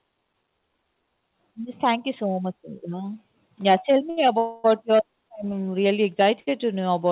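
At 4.1 s there's a short stall from a late packet: the sound just hangs for about 69 ms, through to 4.19 s, with a faint buzzy edge. The next packet wasn't there in time, the jitter buffer ran dry, and the receiver stretched the last bit of audio until the data showed up. Then it picked up exactly where it left off, so nothing's lost; the timing just slips a little.

Right after, from 4.38 to 4.66 s, you get a call audio freeze. The last sound is drawn out into a fading buzz for about 258 ms. It never drops to silence, and when the audio resumes it carries on from the same point, so this is an inserted gap rather than a dropout. Packets were likely held up somewhere along the way, leaving the buffer empty for longer than in the first stall.

The same short stall happens again from 6.4 to 6.49 s, about 68 ms of held sound. All of this sits on top of a narrowband call path with nothing above 4 kHz, which fits a 64 kbps G.711-style codec.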